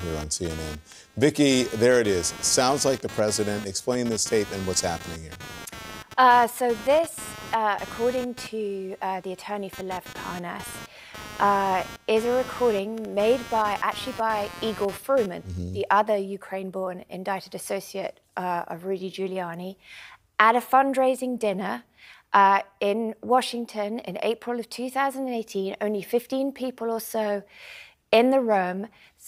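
From 0 to 15.58 s, computer activity noise buzzes at roughly 200 pulses per second, about 15 dB below the sound. Load changes of the processor, graphics card or mouse shift the shared ground.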